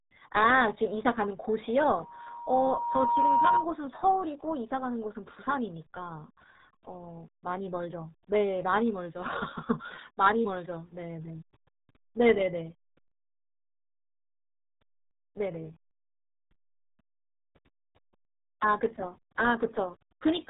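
RealAudio 14.4 codec damage runs through the whole recording. Nothing above about 3.8 kHz survives, leaving the speech muffled, with a gargly, bubbling texture from heavy low-rate coding that fits an 8 kbit/s dial-up-era stream.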